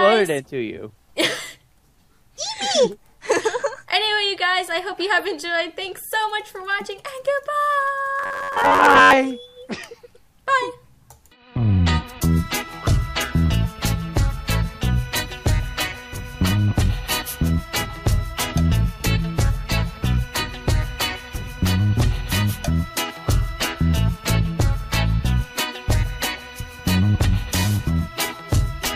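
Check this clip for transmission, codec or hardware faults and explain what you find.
One fault is present. From 8.19 to 9.14 s there is robotic sound from repeated short buffers, a rigid metallic buzz near 94 Hz. Audio was likely arriving too slowly, so a roughly 10.7 ms segment was replayed over most of the missing material.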